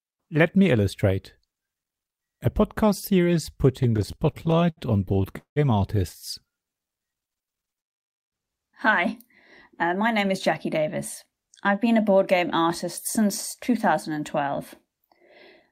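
Repeated stalls (stutter) run from 3.83 to 5.59 s, where packets reached the receiver late or more slowly than they were being played out. The jitter buffer ran dry nineteen times, and each time the receiver stretched the last sound to cover the wait, fading it in the longer holds, the longest being 184 ms. About 437 ms of filler makes up a quarter of that span. Nothing is lost, but the speech drags and stutters forward.

Jitter buffer speed-up follows at 9.73 to 10.33 s and again at 10.79 to 11.32 s, just before "I've been a board". The buffer was holding more audio than it aims for, so the receiver trimmed it by cutting out short pitch-period pieces over and over, removing about 50 ms in each stretch. The speech runs at 108% and then 106% of normal speed with the pitch unchanged, so these stretches sound hurried.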